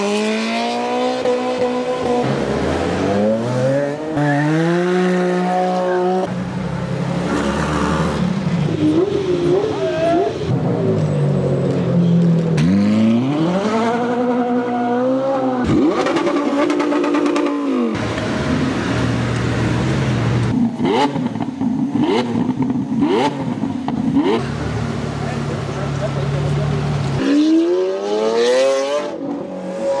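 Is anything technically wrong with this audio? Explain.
No, nothing technically wrong turns up anywhere in this audio.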